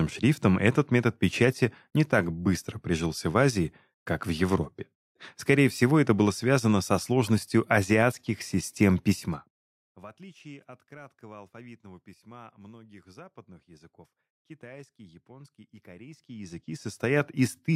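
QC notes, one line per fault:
9.08–10.08 s, zipper noise: After "со сложностью азиатских систем", the speech drops about 25 dB. It falls in unsmoothed 1 dB steps, roughly thirty a second, and each step clicks.
16.04–17.28 s, zipper noise: After "языков китайский японский и", the level climbs about 25 dB. The same stepped 1 dB jumps produce a steady zipping tick.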